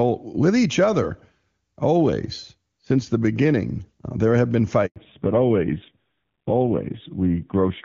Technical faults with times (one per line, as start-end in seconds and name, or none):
4.86-4.96 handover gap
4.96-7.85 fallback to narrowband